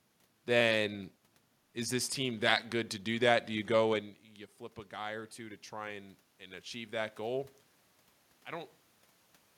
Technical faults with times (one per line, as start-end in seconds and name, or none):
4.89-7.57 automatic gain rising